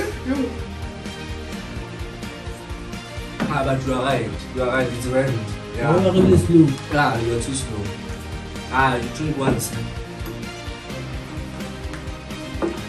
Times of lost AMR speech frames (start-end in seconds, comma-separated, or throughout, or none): none